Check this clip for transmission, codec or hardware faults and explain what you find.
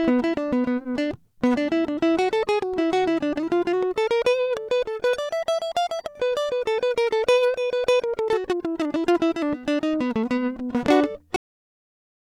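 The music has a cut-off end. At 11.36 s it stops mid-sound and drops straight to digital silence, with no decay, until the clip ends. The final buffers were never written or played back, so the signal simply halts instead of fading.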